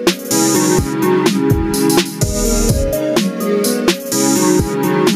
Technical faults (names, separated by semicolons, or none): gain pumping